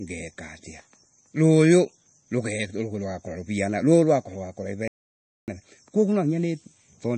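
From the start, the speech carries plainly audible MP3 compression damage. The encoder likely ran short of bits, which fits a low bitrate near 32 kbps. Weak frequency lines drop in and out between frames. That gives a watery, swirling texture. S sounds turn metallic and chirpy, and word onsets lose their crispness.

At 4.88 s a playback stall cuts in. The sound stops dead in mid-flow and stays silent until 5.48 s, about 0.6 s of nothing. The player likely ran out of data or was held up, so output halted until it recovered. Then the audio picks up again. The gap is long enough to sound like a hard freeze, not a natural pause.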